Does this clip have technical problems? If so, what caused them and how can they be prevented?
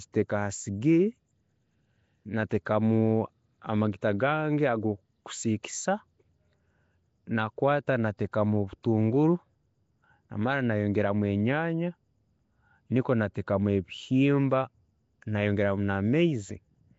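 Yes. Throughout, the speech has a rough, hissy halo and a smeared, underwater quality, with nothing above about 7.7 kHz. The likely cause is Nellymoser compression: blocks coded with few bits, weak bands left empty and filled with noise, at a level that fits about 32 kbps. Recording or exporting with a modern codec such as Opus at a higher bitrate would prevent it.

At 5.63 s a brief hiss runs about 13 ms ahead of a sharp onset, softening it. This is pre-echo: the codec spreads noise sized for the loud attack across its whole block, including the quiet moment before. A codec that switches to shorter blocks on transients would prevent it.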